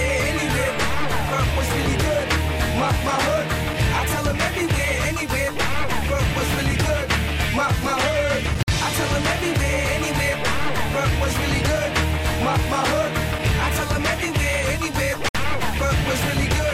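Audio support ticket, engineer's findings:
Two hard dropouts to silence: 8.63–8.68 s (about 53 ms) and 15.29–15.35 s (about 61 ms). Audio cuts abruptly, then resumes without a fade. Likely Bluetooth stall on the wireless headphone link: radio interference delays packets, the headset's receive buffer empties, output halts until retransmitted packets arrive. Short, isolated gaps fit brief interference bursts rather than a sustained link failure.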